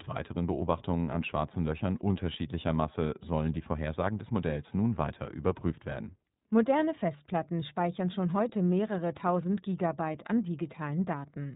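From the first moment to the last, the speech has been through the iLBC codec, and the damage is plainly audible. Everything above 4 kHz is gone, so sibilants lose their bite and the sound is boxed into a telephone band. Each 30 ms frame has its excitation coded independently, and at 13.33 kbps the model can't quite carry the natural texture, leaving the voice clear enough but rough and slightly synthetic throughout.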